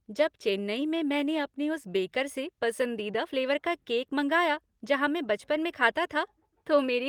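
Nothing stood out on listening to this speech recording.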